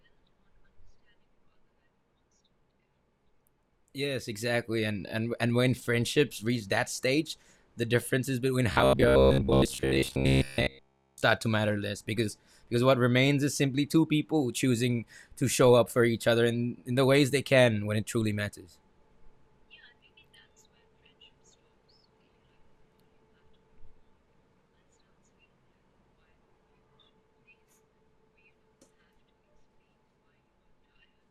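Robotic sound from repeated short buffers affects this speech clip from 8.72 to 11.24 s, between "stage the differences between" and "to matter less because": the voice becomes a rigid metallic buzz near 67 Hz through most of that span, likely from the playback repeating a roughly 15 ms slice while the incoming audio is skipped.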